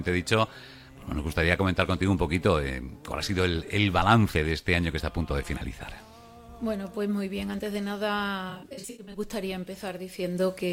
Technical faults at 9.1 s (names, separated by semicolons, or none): AAC frame loss with concealment